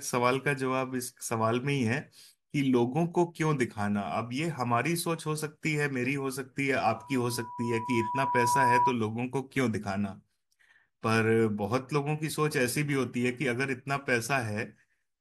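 From 6.95 s to 8.95 s a loudspeaker feedback squeal rises under the speech. A microphone is hearing the loudspeaker it drives, and around 979 Hz the loop gain climbs past unity, so that frequency keeps feeding itself. It swells over roughly a second and a half to sit about 5 dB above the speech before it stops. A steady interfering tone or hum would hold one level. This tone grows from nothing on its own.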